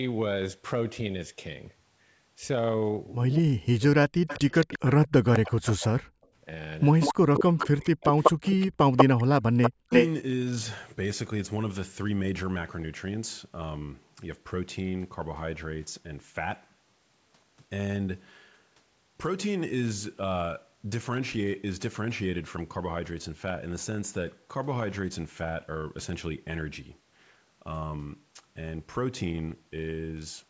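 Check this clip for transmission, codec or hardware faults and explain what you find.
There are real faults here, all within roughly the first ten seconds, and they're the classic echo-canceller trouble you get when both ends of a call talk at once.

Speech suppressed in double talk, from 3.38 to 5.85 s, 7.17 to 8.17 s and 9.14 to 9.92 s. The talker's speech sinks by something like 40 dB in places. The likely cause is the canceller failing to tell the local talker from the loudspeaker echo during overlapping speech and clamping down on both.

Echo leak, from 4.27 to 5.72 s, 7.0 to 9.05 s and 9.63 to 10.08 s. You hear a delayed copy of the speech coming back: about 218 ms late and roughly 15 dB down in the first stretch, then about 193 ms and 353 ms late in the later two, where it's around as loud as the main speech. This is likely the far end's loudspeaker audio getting past its canceller and being sent back.

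Background gated by the echo canceller, from 6.13 to 6.29 s. The room sound drops out for roughly 150 ms, down by about 37 dB at its deepest, then comes straight back. That's the canceller slamming the microphone down while the loudspeaker was active and releasing it a moment later, so the ambience briefly vanishes into near-silence.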